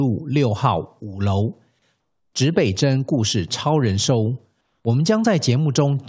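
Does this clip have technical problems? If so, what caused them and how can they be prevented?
Yes. Comfort noise in place of the background appears at 2.00 to 2.33 s and again at 4.61 to 4.85 s. In these pauses the real background gives way to a smooth, featureless hiss, about 6 dB quieter in the first gap and about 4 dB quieter in the second. The likely cause is discontinuous transmission: the sender's voice detector stopped sending audio, and the receiver filled the gap with synthetic noise. Disabling discontinuous transmission, or making the voice detector hold through short pauses, prevents it.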